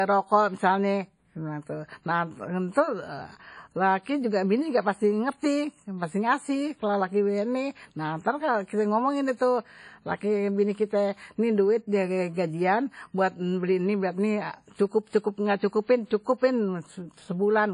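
WMA compression, likely, runs throughout this speech: a ringing, washy sound with hiss breathing under syllables, nothing above 10.1 kHz, consistent with roughly 32 kbps. Pre-echo appears from 15.08 to 15.13 s, where block-wide quantisation noise smears a short hiss about 49 ms ahead of a sharp attack, softening it.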